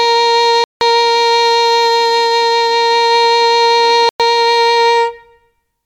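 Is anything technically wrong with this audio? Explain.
Yes. There are two Bluetooth dropouts in this music, from 0.64 to 0.81 s and from 4.09 to 4.20 s. The cause is likely wireless packets arriving too late at the headphones and being discarded, so playback goes silent until usable data returns. The holes last about 170 ms and 110 ms, consistent with a short run of packets lost in each. Each gap cuts in abruptly or with a fade of a few milliseconds, and the music resumes further along, as though it had kept playing underneath.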